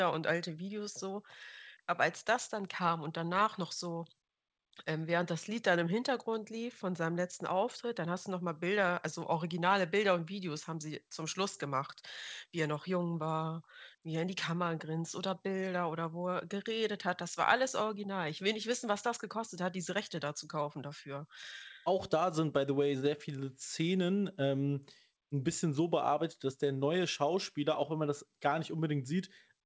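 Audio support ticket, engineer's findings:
Nothing to flag on this speech clip; the top end stops around 8 kHz, which fits a wideband call path like G.722 at 64 kbps along with normal call microphone processing, so no faults found.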